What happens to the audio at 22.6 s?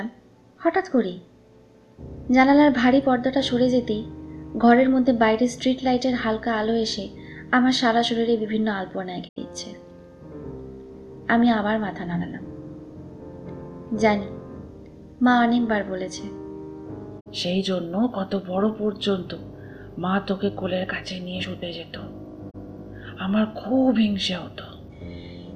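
Just before 22.6 s, from 22.49 to 22.56 s, there is a digital broadcast dropout. The receiver rejected corrupted or missing data and muted its output, fading down over about 20 ms, until valid frames arrived again. About 24 ms of programme is gone, which fits a single lost frame. It sounds like a brief hole. On a waveform the envelope tapers to silence and then resumes. On a spectrogram it shows as a narrow vertical gap across all frequencies.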